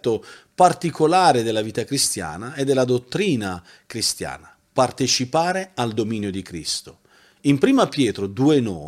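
A speech recording, and nothing is technically wrong with it.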